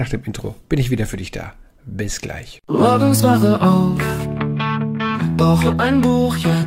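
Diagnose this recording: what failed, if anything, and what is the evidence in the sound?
Nothing failed: no stage from wiring through playback leaves any audible evidence of a fault in this recording.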